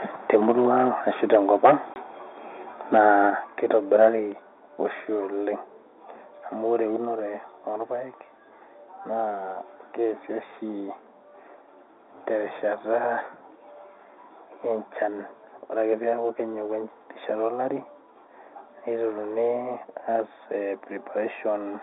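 Throughout, one channel arrives a fraction of a millisecond late before the two are summed to mono, so this channel delay (comb filtering) cuts a notch around 3 kHz, making the speech sound hollow.

Microphone overload, likely from the input volume being set too high, drives peaks into the converter's limit at 0.35–0.88 s, 1.34–1.36 s, 1.64–1.74 s, 2.93–3.00 s and 4.01–4.06 s. The flattened tops, about 1 to 5 dB over, give the loudest syllables a harsh, crackly edge, worst at 1.64 s.

At 1.94–1.96 s, packet loss filled with silence drops one 20 ms packet and plays nothing in its place, leaving a sharp-edged gap.

The microphone volume is stepped down at 3.3 s, 4.32 s and 7.05 s by about 5, 3 and 2 dB respectively. The software is likely reacting to the overload, and each cut makes speech and background fall abruptly in level.

Through all of this, the G.711 telephone coding holds the sound to the narrow 300–3,600 Hz line band.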